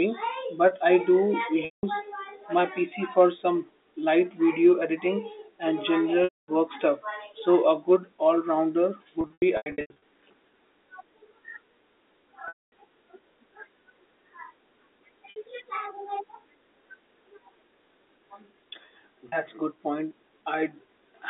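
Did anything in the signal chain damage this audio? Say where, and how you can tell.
Yes, at the network stage: packet loss with pitch repetition at 1.65, 6.24, 9.21 to 9.96 (scattered), 12.48, 15.3 and 19.29 s, just before "good point". The receiver loops the last pitch period, giving a brief buzzy hold, then fades. On a spectrogram, frozen harmonic stripes taper into a blank gap.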